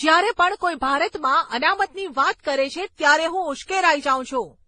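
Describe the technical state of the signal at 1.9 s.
At 1.9 s, as throughout the clip, the speech sounds dull, with nothing above 9.7 kHz, and carries several kinds of smeared, watery artefact at once. This is likely transcoding between lossy codecs: successive low-bitrate passes, ending in Vorbis, each re-encoding the previous pass's damage.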